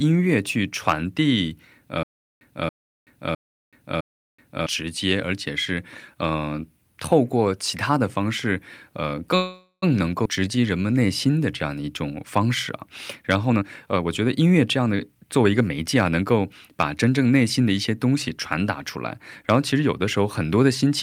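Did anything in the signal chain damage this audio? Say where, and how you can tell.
Yes. A stutter with silent gaps sits at 2.03 to 4.66 s, at the playback or streaming stage. A 280 ms burst repeats four times on a 658 ms cycle, with about 378 ms of digital silence between repeats. This is likely a stalled stream replaying its last fragment on each retry, and the audio due in that span is lost.

A call audio freeze runs from 9.35 to 9.84 s, on the network side. For about 468 ms the last sound is stretched into a fading buzz or hiss, with a 60 ms stretch of silence. Speech then resumes where it stopped, so nothing is missing. This likely comes from delayed packets draining the jitter buffer, which adds 468 ms of delay.

A skip ahead follows at 10.24 to 10.27 s, also a network or jitter-buffer event. Roughly a tenth of a second of speech is dropped, and the two sides are joined almost directly with only a 9 ms fill. 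Later audio was already queued, so a stretch was dropped on the way or by the overflowing jitter buffer.

A jitter buffer slow-down comes straight after, from 10.40 to 11.33 s. Speech runs at 89% speed with unchanged pitch, sounding drawn out, as the receiver repeats single pitch periods to add 116 ms of reserve after the skip.

A jitter buffer speed-up spans 13.48 to 17.05 s. Speech plays at 114% speed at the same pitch and sounds hurried. The receiver is trimming short pitch-period pieces, roughly half a second in total, to cut an excess of buffered delay.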